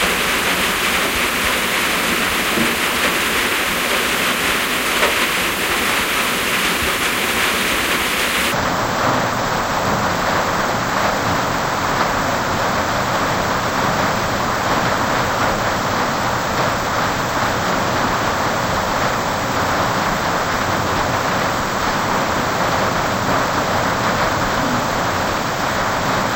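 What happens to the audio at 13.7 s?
The sound at 13.7 s plays at half speed and a full octave low. It falls inside a stereo read as mono fault running from 8.52 s to the end. The interleaved left and right samples are being read one after another as a single channel.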